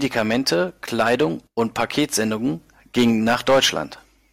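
Hard clipping runs through the whole speech clip. The signal is driven about 9 dB too hot, so a small share of peaks are flattened, adding harsh crackle.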